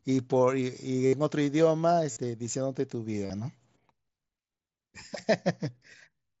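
Concealed Bluetooth headset packet loss occurs three times, at 1.06 to 1.13 s (about 68 ms), 2.11 to 2.17 s (about 53 ms) and 3.26 to 3.30 s (about 38 ms). Each time, packets between the headset and phone are lost, and the receiver fills the gap by repeating the best-matching stretch of roughly the last 20 milliseconds. These runs are too long to hide, so each is heard as a buzzy, steady tone at full level, with a brief warble as the real speech resumes through the wideband mSBC link.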